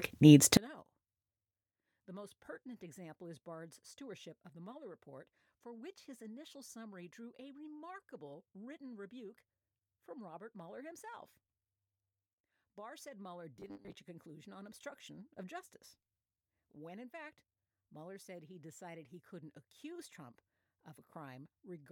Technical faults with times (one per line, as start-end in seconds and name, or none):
0.57-21.91 one channel inverted
13.56-13.98 robotic sound from repeated short buffers